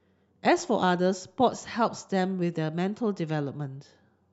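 A short speech recording, with no technical faults to report. Nothing in it calls for a time stamp or a cause.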